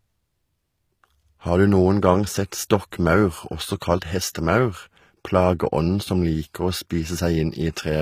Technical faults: HE-AAC compression

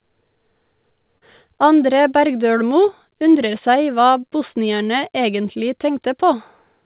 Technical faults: short concealed packet loss

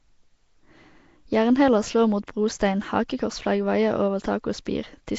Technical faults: Nellymoser compression

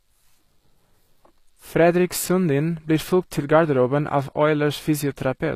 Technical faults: HE-AAC compression

